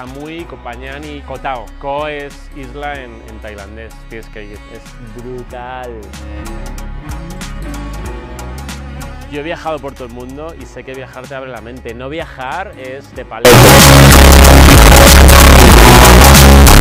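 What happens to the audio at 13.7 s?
At 13.7 s the sound is inside a float-read-as-integer fault that runs from 13.45 s to the end at 16.81 s. The cause is likely 32-bit float samples being read as 32-bit integers, so each sample's sign and exponent bits decide its level. The waveform turns nearly square at an almost fixed, high level: abruptly very loud and harsh, with background noise as loud as the main sound, though pitch can still be followed.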